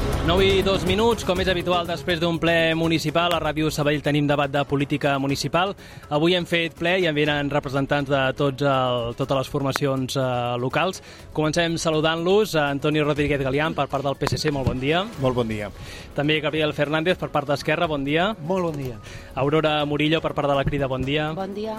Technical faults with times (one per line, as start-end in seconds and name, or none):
3.31-3.33 loud pop
9.76-9.78 loud pop
14.27-14.50 loud pop